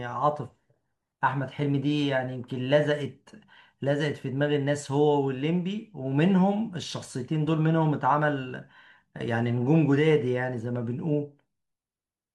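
A speech recording with no audible technical faults.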